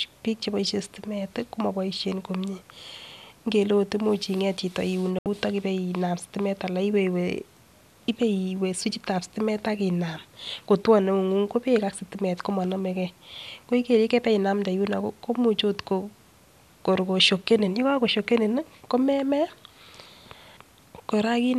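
From 5.19 to 5.26 s, a digital broadcast dropout mutes the speech: a clean 72 ms silent hole, fitting three failed frames, not concealment's smeared warble.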